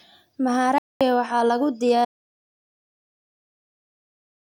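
Speech clip, and it has two separate holes in it. The first is a digital broadcast dropout from about 0.78 to 1.01 s. The sound mutes for roughly 224 ms, and the speech picks back up at "waxaa lagu". A gap that short and clean is what a receiver does when a run of frames fails and it mutes until good ones arrive. The length fits around seven lost frames, and whatever was sent during that stretch simply isn't there. The second is an audio dropout to silence starting at 2.05 s, right after "waxaa lagu", and it never recovers. From there to the end of the clip it's dead silence with no room tone underneath, so the recorder kept writing while its input had gone away, most likely a disconnected device, a failed link or a stray mute somewhere upstream.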